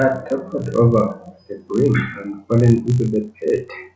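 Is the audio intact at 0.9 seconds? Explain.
No. Throughout the speech, including 0.9 s, the resampler restarted on every 20 ms block, leaving edge errors that buzz at 50 Hz, unlike mains hum, only while signal sounds.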